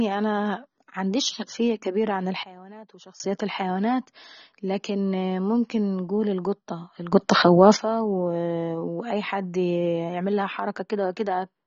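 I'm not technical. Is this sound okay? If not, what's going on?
No. The speech has AAC compression damage throughout, likely from low-quality encoding. It sounds dull and smeared, with a warbling, fizzy edge on hiss-like sounds, because nothing above 7 kHz remains and fine detail was discarded to save space.

There are also two sudden gain jumps, likely from a level setting applied instantly instead of gradually. From 2.43 to 3.20 s, between "معنديش خلفية كبيرة عن" and "الحيوانات لكن ممكن انقول", the level drops well down at once. From 7.13 to 7.77 s, between "لكن ممكن انقول القطة" and "واي حد يعملها", it jumps up abruptly. The background noise shifts along with the speech both times.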